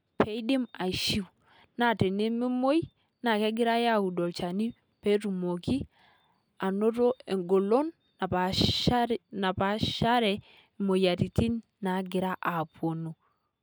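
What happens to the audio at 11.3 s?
At 11.3 s the speech carries on cleanly, with no dropout, click, distortion or other fault at that point.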